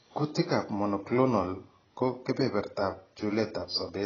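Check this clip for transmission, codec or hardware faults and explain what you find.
AAC compression runs through the whole speech clip. Nothing is present above 6.8 kHz, and the remaining spectrum sounds thin and patchy, with a watery, warbling texture on sustained vowels and fizzy, smeared sibilants. The likely cause is heavy AAC-LC coding at a low rate, consistent with roughly 16 kbps. At that rate the encoder lowers its bandwidth and spends too few bits on each frame, leaving spectral holes or filling bands with substitute noise. The result is dull and smeared.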